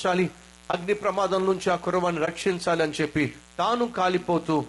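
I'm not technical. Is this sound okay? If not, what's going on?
No. A steady, raspy buzz runs underneath the voice from start to finish, quieter than the speech but always there. This is mains buzz: electrical interference from the power supply, here at 60 Hz, leaking into the recording as a harsh hum with gritty overtones.

The voice itself sounds rough and grainy throughout, with an artificial, hissy quality in the upper range. That is likely low-delay AAC compression, the kind used in video calls, squeezing the sound so hard that fine detail in the voice gets smeared and replaced by noise.

Twice, the sound briefly drops out, from 0.71 to 0.74 seconds and from 2.25 to 2.28 seconds, each gap lasting about 20 milliseconds. These are AAC frame loss with muting: a small chunk of data went missing, so the player filled it with silence, fading out and back in.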